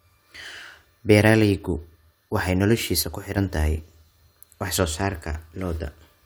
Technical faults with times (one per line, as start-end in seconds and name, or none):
3.03-3.37 sudden gain jump